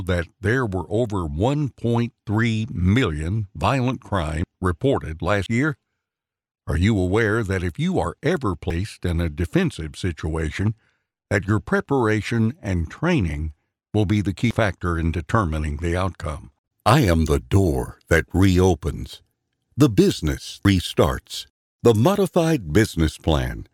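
Samples were likely overwritten before being read, a dropped buffer (overrun), at 4.44, 5.46, 8.70, 14.51 and 20.65 s. Each gap closes with no silence: a sudden jump, skipping about a third of a second at 4.44 and 20.65 s and about a tenth elsewhere.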